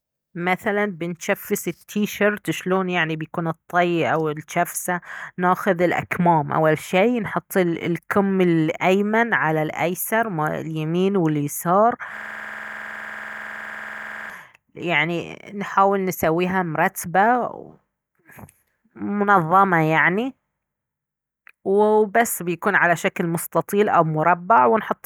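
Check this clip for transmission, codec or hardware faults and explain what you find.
A system hang loop affects the speech from 12.17 to 14.30 s. The host or driver stalled while the audio hardware kept replaying its ring buffer, so one 46 ms slice repeats about 46 times at 21.5 Hz, which fits a 2048-sample buffer. It sounds like a rapid, mechanical stutter. On a waveform, an identical block tiles across the span; a spectrogram shows frozen, repeating columns with vertical seams every 46 ms.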